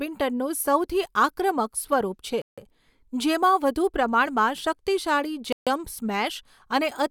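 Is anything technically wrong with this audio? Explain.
Yes. The speech drops to dead silence twice, from 2.42 to 2.58 s (about 0.16 s) and from 5.53 to 5.67 s (about 0.14 s), then resumes. These gaps are most likely a Bluetooth stall: radio interference held up packets, so the headphones' playback buffer emptied and output paused until the retransmitted packets arrived. Short, clean holes like these fit that pattern.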